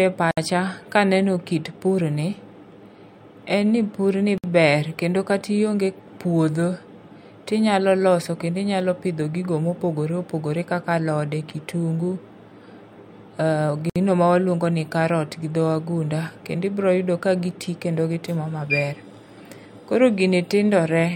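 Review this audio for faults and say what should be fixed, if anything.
Three short dropouts break up the speech, at 0.31 s, 4.38 s and 13.90 s, each about 60 ms of silence with smeared edges. That's a gap at a join of encoded pieces: the audio was encoded in separate chunks and stitched together, so each chunk's encoder start-up delay and final-frame padding stayed in. The speech then picks up right where it left off. To prevent it, encode the whole thing in one pass, or trim the encoder delay and padding at every join.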